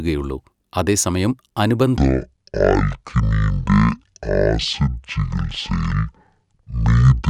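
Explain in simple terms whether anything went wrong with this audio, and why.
From 1.97 s to the end at 7.29 s, the speech plays as a section at the wrong speed: it runs at about half its proper rate, so it drags and drops to nearly an octave lower, deep and slow. Because the timing and the pitch sink together, this is a playback speed problem, not a pitch effect that would lower the voice while keeping its pace. The likely cause is that this stretch was played or edited against the wrong clock.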